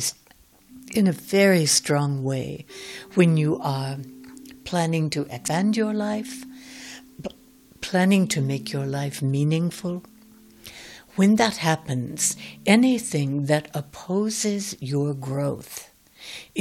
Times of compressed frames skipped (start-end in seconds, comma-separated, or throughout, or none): 5.47